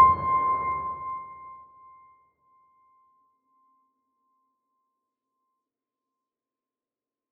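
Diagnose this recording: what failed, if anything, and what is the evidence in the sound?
Zipper noise in the gain stage, where level is applied per buffer in the driver or processing path. From 0.68 to 1.76 s the level falls by roughly 15 dB, and a fine ticking rides on the sound throughout the drop, about fifteen ticks per second. Each tick is a discrete 1 dB gain step applied with no interpolation, so the waveform jumps at every step boundary and produces a small click.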